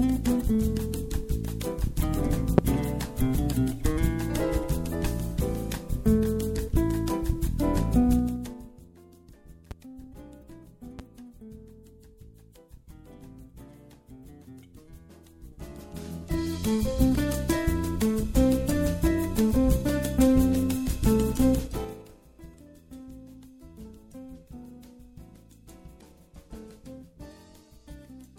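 At 2.58 to 2.61 s there's a loud pop, one sharp hit about 20 dB above the audio, likely a voltage spike from a switch or static. Then 8.19 to 8.88 s brings zipper noise: the level drops about 25 dB in audible 3 dB steps, ten a second, ticking as it goes. Two more pops land at 9.71 to 9.74 s and 10.99 to 11.02 s, each about 25 dB up. Zipper noise returns at 15.28 to 16.81 s as the level climbs about 25 dB in finer 1 dB steps, and again at 21.59 to 22.10 s on a drop of about 25 dB in coarse 4 dB steps.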